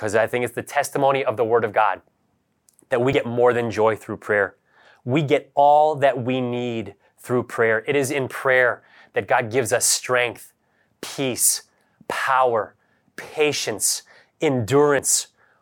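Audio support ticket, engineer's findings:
Audio missing between chunks at 3.13 s (between "that we" and "more than joy through"), 11.03 s (after "gives us strength") and 14.99 s. Around 50 ms skipped each time, likely at 4-second recorder chunk boundaries. Waveform shows abrupt splices with no gap.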